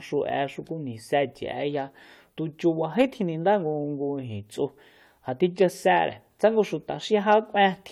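Speech, with no audible faults.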